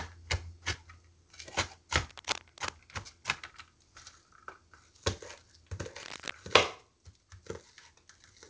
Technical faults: cable scratch noise

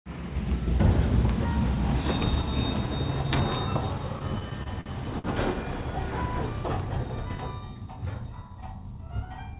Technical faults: repeated stalls (stutter)

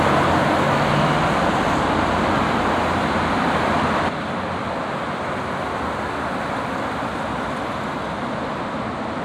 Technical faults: one channel drops out

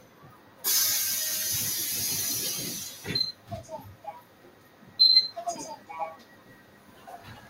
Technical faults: noise suppressor applied to music or sounds; sound cut by the noise suppressor

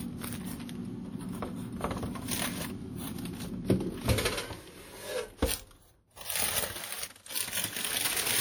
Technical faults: WMA compression

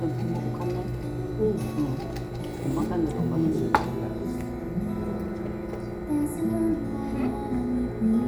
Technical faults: none

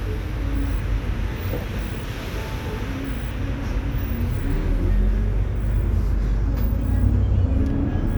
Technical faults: dropped buffer (overrun)

